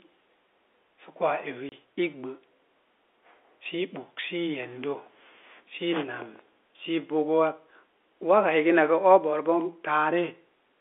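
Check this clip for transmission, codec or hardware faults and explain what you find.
One transmission fault stands out: packet loss filled with silence, at 1.69 to 1.72 s. For 30 ms the speech drops to dead silence, which fits three lost 10 ms packets, and the receiver inserted nothing in their place. The waveform is cut abruptly on both sides. Concealment would have bridged the gap with a smeared or repeated stretch of sound, whereas here there is a true hole. The narrow G.711 telephone band, around 300 Hz to 3.5 kHz, can be heard throughout.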